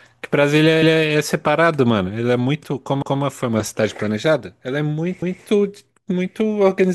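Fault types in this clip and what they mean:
Overlapping chunks: the speech was processed in blocks about 2.0 s long, and each new block starts 200 ms before the previous one finished, so that stretch of audio is played a second time at the join. In this clip the repeat is heard from 3.02 to 3.22 s and again from 5.22 to 5.42 s, each time as a brief stutter where a fifth of a second of speech doubles back on itself.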